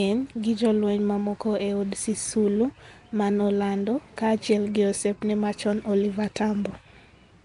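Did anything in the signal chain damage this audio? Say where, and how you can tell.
Yes, at the codec stage, throughout the speech. It has a rough, hissy halo and a smeared, underwater quality, with nothing above about 10.6 kHz. This is likely Nellymoser compression, Flash's old microphone codec. It spends a fixed two bits per sample, so weak bands get no bits and are filled with noise, which creates the hiss. A plain low-pass filter would dull the top but stay clean. Here the coarse texture points to a rate around 44 kbps.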